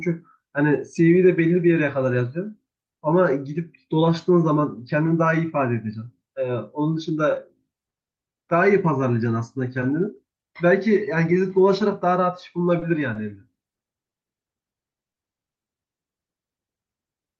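At 12.79 s, 13.13 s and 15.12 s there's a short stall from a late packet. The jitter buffer ran dry, so about 20 to 30 ms of sound got held with a slight buzz or dip, though nothing was lost. Then at 15.31 s and 15.51 s comes short concealed packet loss: about 40 ms each went missing and was patched over, leaving a brief smear or wobble.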